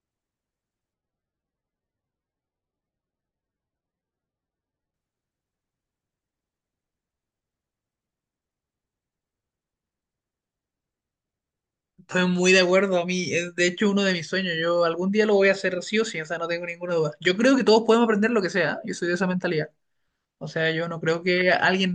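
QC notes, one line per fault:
0.94 to 4.94 s, adaptive stream at a lower bitrate: the speech suddenly turns swirly, with no gap at either edge. Codec artefacts rise. This points to the stream dropping from about 128 kbit/s MP3 to roughly 12 kbit/s, then recovering.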